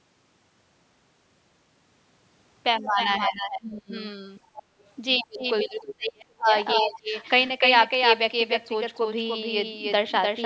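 Right from the start, the speech is doubled: a second full-band copy trails the original by around a third of a second, only a few dB quieter, with no room tail on it. It's likely a doubled audio track, with the speech captured twice or held out of step in an edit. From 2.8 to 3.94 s the speech sinks by something like 25 dB across roughly a second in all. That's most likely speech suppressed in double talk, the echo canceller ducking the talker while the far end speaks. Between 4.38 and 5.27 s a faint second voice, about 20 dB under the talker, sneaks in. It's likely the other side's voice leaking through from the loudspeaker. A deeper suppression follows from 5.19 to 7.14 s, dipping around 35 dB over about a second and a half, and during it the leak returns briefly from 6.74 to 6.98 s. The call's microphone processing leaves nothing above 8 kHz.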